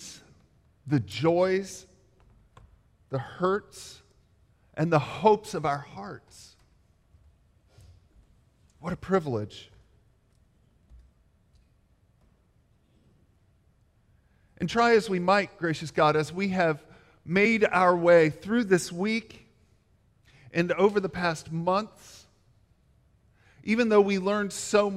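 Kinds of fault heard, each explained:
No technical faults heard.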